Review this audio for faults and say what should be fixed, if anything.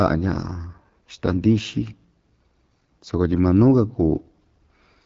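The speech carries AMR wideband (HD Voice) codec damage from start to finish. It is rough and raspy, which points to one of the codec's lowest modes, around 8.85 kbit/s. Above about 6.4 kHz the top band is filled with shaped noise instead of real detail, and nothing sits above 7.5 kHz. That noisy upper band and the wideband ceiling set it apart from narrowband AMR, which stops near 3.4 kHz. To prevent it, run the call at 12.65 kbit/s or higher.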